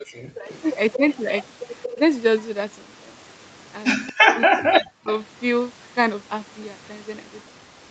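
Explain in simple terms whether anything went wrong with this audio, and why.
A few things went wrong, all from the echo canceller on a speakerphone call.

Background gated by the echo canceller: right at the start, 0.0 to 0.06 s, the room sound briefly drops out almost completely. The canceller clamped the microphone down hard while the loudspeaker was playing, then let go a moment later.

Speech suppressed in double talk: the voice dips and thins out in patches from 0.34 to 1.0 s, again briefly at 1.93 to 2.0 s, and most heavily from 4.24 to 5.08 s, where it nearly vanishes. Likely both sides were talking at once, and the canceller turned everything down because it couldn't separate the talker from the loudspeaker.

Echo leak: a faint, delayed copy of the voice trails about a quarter of a second behind at 0.52 to 0.98 s, 1.83 to 2.44 s, 4.07 to 4.13 s and, very quietly, 4.85 to 5.12 s. 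It's likely the speakerphone side's canceller failed to scrub out everything its microphone picked up and sent it back.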